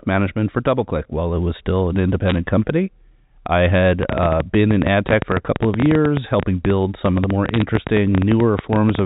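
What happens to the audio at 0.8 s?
Nothing goes wrong at 0.8 s; the speech there runs on intact, carried through G.711 telephone coding with its usual band limit below 4 kHz.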